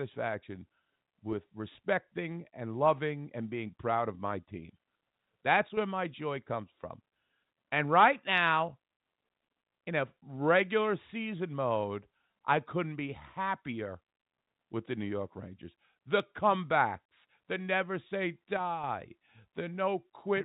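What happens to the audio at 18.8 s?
One stereo channel most likely dropped out for a moment, from 18.57 to 18.84 s, just after "comebacks the never say". With only one side feeding the mono sum, the speech shared by both channels loses half its contribution, so the level falls abruptly by about 6 dB for roughly a quarter of a second and then jumps back. Anything carried only in the missing channel vanishes for that span.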